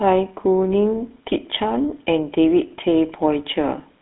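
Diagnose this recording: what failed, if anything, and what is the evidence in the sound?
The failure is in the codec stage: GSM full-rate coding, present from start to end. The speech has a plainly audible buzzy, gravelly roughness. The band runs from about 250 Hz to 3.6 kHz, with nothing above 3.8 kHz. That fits a 13 kbps full-rate stream. The codec models the vocal tract as a filter and drives it with regularly spaced pulses, keeping only every third excitation sample. That coarse pulse train causes the grit.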